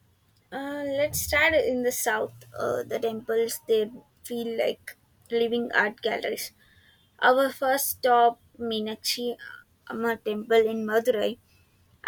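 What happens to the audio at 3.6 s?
Nothing goes wrong at 3.6 s; the speech runs on intact through that moment, with no break, click, dropout or distortion.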